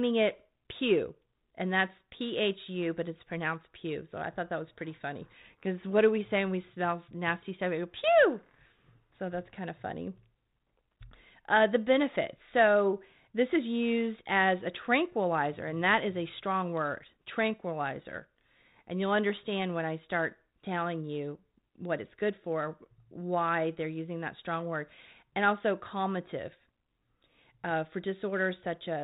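No technical faults are present.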